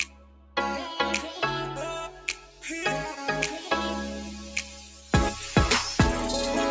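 From the start the sound carries the mark of a noise suppressor applied to music or sounds: a speech-tuned suppressor keeps treating sustained and ambient content as noise, so the level swings by around 10 dB as it clamps and releases. Onsets come through intact while held material and tails sink, giving a pumping, fluttering thinness. A plain compressor would behave differently, since it reacts to loudness rather than to how steady a sound is.

The first sound cut by the noise suppressor runs from 0.05 to 0.56 s, dropping about 12 dB, with roughly half a second affected. The second, 2.14 to 2.63 s, dips about 8 dB. The third, 4.42 to 5.13 s, is the longest at well over half a second, sinking about 10 dB. Each time a steady or decaying sound sinks in level or has its tail cut short. A dropout would instead go fully silent. The band-limiting from call microphone processing, with nothing above 8 kHz, is steady and separate from these dips.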